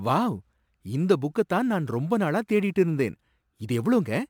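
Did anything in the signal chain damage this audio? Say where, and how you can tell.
Yes: sample clock jitter at the converter, throughout. A faint hiss rides on the speech, about 35 dB down, rising on loud, bright sounds and vanishing in pauses, unlike steady background noise.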